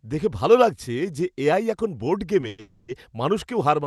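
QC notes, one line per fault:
2.48–2.60 s and 2.60–2.90 s, call audio freeze: right after "এখন বোর্ড" the speech stalls twice in a row, about 0.1 s then about 0.28 s, held as a buzzy continuation of the last sound that fades rather than dropping to silence. Likely packets arrived late and the jitter buffer ran dry, so the receiver padded the wait. Speech then resumes intact, just later. On a spectrogram there are smeared, repeated harmonic bands; on the waveform, a decaying stretch instead of a gap.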